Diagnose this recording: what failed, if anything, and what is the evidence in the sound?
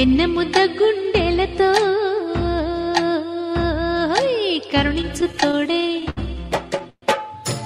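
Packets reached the receiver more slowly than they were played out, so the jitter buffer kept running dry between 5.01 and 6.19 s. The result is repeated stalls (stutter): 11 brief holds, the longest 67 ms, about 169 ms of filled sound in total. Nothing is lost, but the audio drags and hitches.

A call audio freeze follows at 6.90 to 7.04 s. The last sound is held and fades into about 60 ms of silence, 124 ms in all, and then the audio resumes where it stopped. The likely cause is a network delay that emptied the jitter buffer and pushed playback 124 ms later.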